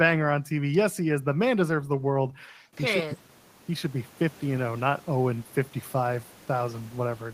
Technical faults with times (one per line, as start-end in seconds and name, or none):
none